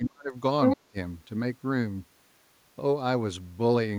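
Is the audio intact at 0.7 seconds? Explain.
No. From 0.63 to 0.76 s the other side's voice leaks through, somewhat louder than the talker. The far end's loudspeaker signal was likely not fully removed by the echo canceller, so a brief second voice sits in the microphone signal.

Immediately after, from 0.76 to 0.96 s, the talker's speech is suppressed in double talk. The level dips by as much as about 30 dB across roughly 150 ms, likely because the canceller, unable to separate the talker from the echo, attenuated both.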